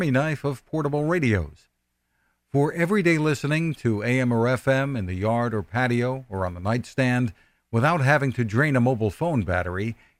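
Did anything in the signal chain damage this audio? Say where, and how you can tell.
No, nothing in the signal chain damaged this speech recording. No stage between capture and playback leaves an audible mark on it.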